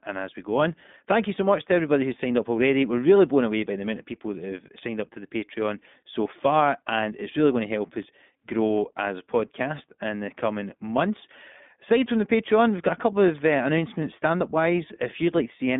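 iLBC codec coding runs throughout the speech. The codec rebuilds the excitation of each short frame on its own, without carrying anything over from the previous frame, and the frame-by-frame graininess fits 20 ms frames in the 15.2 kbps mode. The line band spans roughly 150 Hz to 3.6 kHz, with nothing above 3.8 kHz, so sibilants lose their edge and the sound is dull and narrow. The codec damage is plainly audible as a rough, synthetic texture on every phrase.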